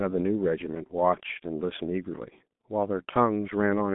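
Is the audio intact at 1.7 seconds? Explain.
No. At 1.7 s, as across the whole clip, the speech carries heavy G.723.1 codec damage. The codec sends coarse 30 ms frames of a slowly updated voice model, at a rate that fits roughly 6 kbit/s. The result is muffled, hoarse speech with smeared consonants. On a spectrogram the energy is confined to a telephone band of about 150 Hz to 3.6 kHz, with nothing at all above 3.8 kHz.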